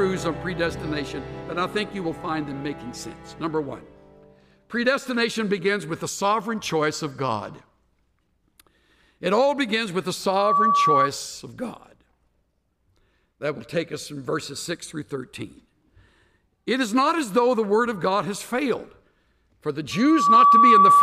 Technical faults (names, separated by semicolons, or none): loudspeaker feedback squeal